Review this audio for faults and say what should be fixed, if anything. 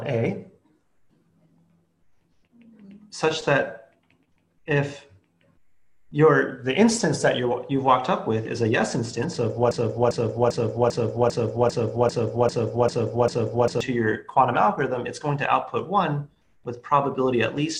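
A broken-record loop runs from 9.71 s to 13.8 s: a 0.40-second fragment repeats exactly, back to back, ten times, and whatever should have played there is lost. The likely cause is a player, encoder or stream that stalled and kept sending the last buffered fragment. On a waveform the span shows identical blocks tiled every 0.40 s, and a spectrogram shows the same pattern stamped out in vertical stripes. To prevent it, detect stalls and output silence or resync instead of replaying stale buffers.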